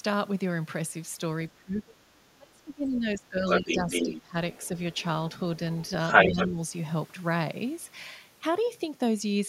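From 1.55 to 4.36 s, speech suppressed in double talk: the talker's speech dips by up to about 25 dB, likely because the echo canceller ducked both sides. On a waveform the envelope collapses. From 3.49 to 4.22 s the other side's voice leaks through at roughly speech level, a second harmonic pattern overlapping the first. Faint scraps about 25 dB down follow at 4.53, 4.93 and 5.83 s, then a leak about 10 dB louder than the speech from 6.07 to 6.45 s. From 6.27 to 6.59 s the speech is suppressed again, by about 10 dB.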